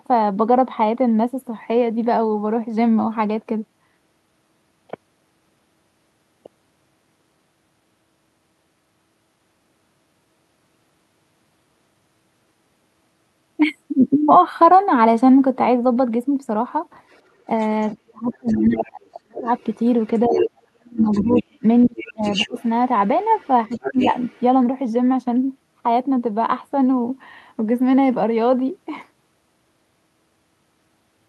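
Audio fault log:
17.11–17.92, 18.3–20.48, 20.98–21.43, 21.79–22.65, 23.38–24.41 s: other side's voice leaking through. A second voice is audible, faint at first and rising to about 5–10 dB below the talker, likely residual loudspeaker echo the canceller missed. On a spectrogram it shows as overlapping harmonic stripes.
17.95–19.48, 20.27–22.56, 23.69–24.14 s: speech suppressed in double talk. The talker dips by up to about 40 dB, and only about 15 dB in the last stretch, likely because the canceller ducked everything while both sides spoke. The waveform shows sudden envelope holes and the spectrogram shows dark, high-cut gaps.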